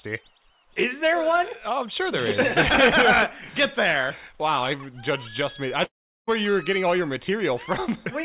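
From 5.84 to 6.29 s the audio breaks into a brief fading buzz or hiss and then silence, and it resumes with about 0.44 s missing, likely a long network dropout. The band stops at 4 kHz, which fits a 64 kbps G.711 call path.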